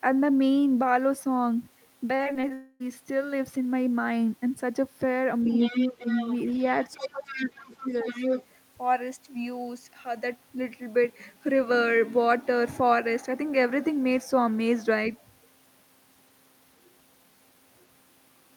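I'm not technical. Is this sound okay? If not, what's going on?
No. From 2.15 to 2.52 s there is repeated packet loss, which gives a robotic sound: five short holes, none longer than about 40 ms, each patched by stretching the last bit of sound. That makes the audio choppy.

Right after, from 2.54 to 2.82 s, the sound never cuts to silence. It turns into a smeared, fading continuation of the last sound for about a quarter of a second. That is likely a long network dropout, and the real audio for that stretch is lost.

From 5.45 to 7.52 s a second, quieter voice is audible under the speaker, and from 7.79 to 8.45 s it is about as loud as the speaker. This is the other side's voice leaking through. The loudspeaker sound likely reached the microphone and the echo canceller didn't remove it.

While both voices overlap, the speaker's own voice is pushed down. There is a brief slight dip at 5.71 s, a clearer cut from 5.92 to 6.08 s, and a deep drop from 6.94 to 8.05 s lasting about a second. 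That is speech suppressed in double talk, likely the echo canceller turning everything down when it couldn't tell the two voices apart.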